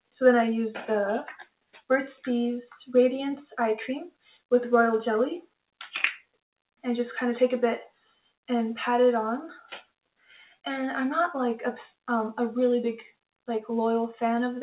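All the way through, a noise suppressor built for speech is left running on the sound. It treats held tones and tails as noise, so the level pumps by a few dB.

It bites hardest in the sound cut by the noise suppressor at 1.4–1.9, 4.11–4.5, 5.45–5.86, 6.21–6.84, 7.88–8.49, 9.61–10.65 and 13.08–13.48 s. Sustains sink by about 20 dB, and decays get chopped off.

All of it sits in a band that stops at 4 kHz, which points to a narrowband G.711-style call path.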